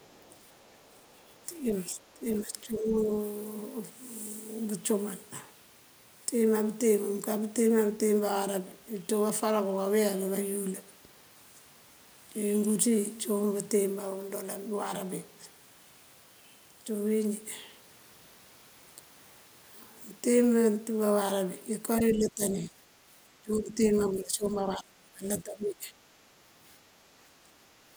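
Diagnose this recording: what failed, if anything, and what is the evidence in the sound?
From 0 to 1.27 s a second, very faint voice sits far below the speech. It is the other side's voice leaking through, most likely residual echo the call-processing echo canceller failed to remove. On a spectrogram it shows as faint, separate harmonic traces under the main speech.

Speech suppressed in double talk appears at 1.57–1.64, 1.91–2.25, 2.46–3.14, 21.99–22.72, 23.43–25.26 and 25.42–25.92 s. The echo canceller's suppressor likely clamped both talkers. The waveform envelope sags, worst around 23.4–25.3 s (roughly 25 dB down).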